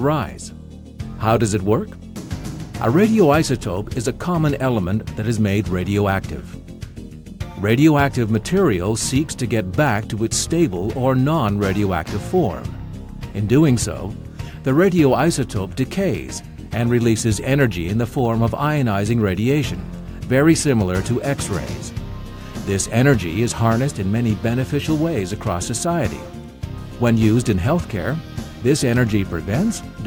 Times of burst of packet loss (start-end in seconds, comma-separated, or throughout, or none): none